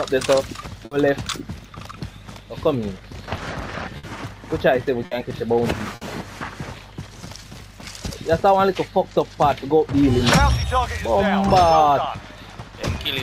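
At 0.85, 3.97, 5.05 and 5.95 s, the sound briefly freezes and fades for about 60 ms before jumping ahead: bursts of packet loss, each concealed by stretching the last audio, with 60 ms missing.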